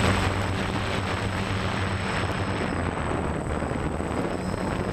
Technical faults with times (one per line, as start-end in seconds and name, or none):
0.42 audio missing between chunks
1.37 audio missing between chunks
2.32 audio missing between chunks
3.27 audio missing between chunks
4.22 audio missing between chunks